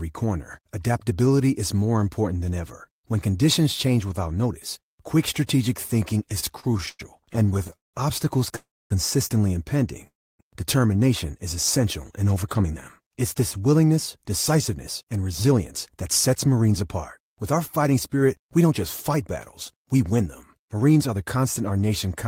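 From 6.29 to 8.56 s, after "notice quick strategic thinking", repeated stalls (stutter) break the speech with 22 short gaps, the longest 179 ms. Late packets keep emptying the jitter buffer, so the sound drags in many small hiccups rather than one pause. Call audio freezes follow at 8.56 to 8.92 s and 10.07 to 10.41 s. Each is a single hold of about a third of a second that fades to silence, likely from packets held up in transit, and the speech then resumes where it stopped. From 12.44 to 21.79 s, after "is essential in", a jitter buffer speed-up runs the speech about 6% faster at unchanged pitch, trimming roughly 0.7 s in total. It sounds hurried rather than interrupted.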